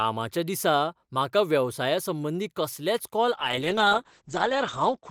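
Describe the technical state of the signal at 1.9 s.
Nothing is wrong with the signal at 1.9 s; the speech there comes through intact, with no dropout, click, distortion or other fault to be heard.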